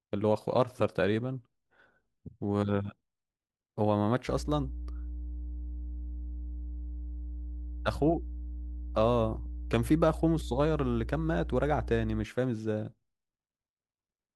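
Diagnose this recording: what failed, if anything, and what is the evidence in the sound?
The analogue wiring picked up mains hum. From about 4.26 s to 12.26 s a steady low tone sits under the speech at 60 Hz, fairly loud and not far below the level of the voice, then drops out cleanly. That's the power line leaking into the signal path, most plausibly through a ground loop or a transformer sitting close to a cable or input.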